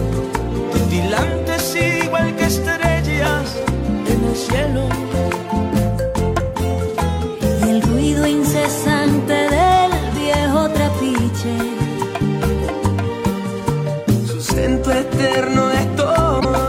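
At 16.39 s, lasting about 56 ms to 16.45 s, the audio skips ahead and the next moment comes out garbled, most likely from a broken MP3 bit reservoir. The span fits roughly two frames of about 26.1 ms. Each MP3 frame can store part of its data in earlier frames. When frames go missing, the following frames reach back for that borrowed data and decode bytes belonging to some other frame, producing a short corrupted burst before normal decoding resumes.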